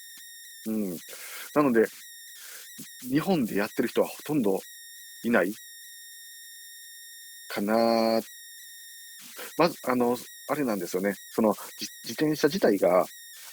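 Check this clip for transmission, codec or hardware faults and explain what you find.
There's one hardware fault running through the whole speech clip: converter idle tones. An undithered delta-sigma converter settles into repeating bit patterns on small inputs, giving tones around 2 kHz heard as whistles, buzzy chirps or rough hiss in pauses and grainy noise under the speech, about 20 dB below the speech.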